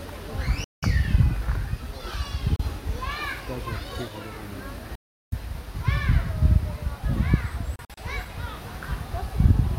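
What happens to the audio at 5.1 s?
At 5.1 s the sound drops out completely. From 4.95 s to 5.36 s there is a hole of about 0.4 s with sharp edges. When the sound returns it has moved on, as though it kept playing through the silence. This is most likely a Bluetooth dropout: the audio packets did not reach the headphones in time and were thrown away, so the output stayed silent until good packets arrived again.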